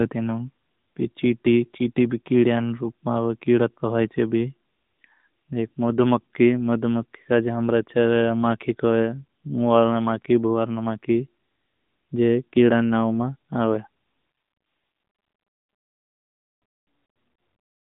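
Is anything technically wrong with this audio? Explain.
Yes. Throughout, the AMR narrowband mobile codec confines the speech to about 150 Hz–3.7 kHz, with nothing above 3.8 kHz. Its pulse-driven vocal-tract model adds a buzzy, synthetic edge that fits roughly 10.2 kbps, unlike a plain low-pass filter, which would only sound dull.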